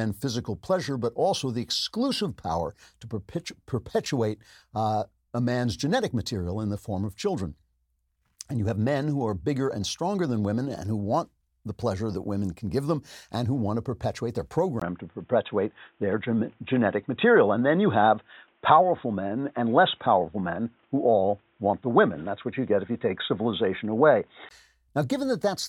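From 14.80 s to 24.51 s the speech turns dull and boxy, consistent with an input switched to a poorer device, likely another microphone or a headset's call profile. At 14.80 s there is a 20 ms gap, after which nothing above 3.8 kHz gets through, the level shifts by around 5 dB, and a new background noise appears roughly 45 dB below the speech. The fuller, brighter sound returns at 24.51 s.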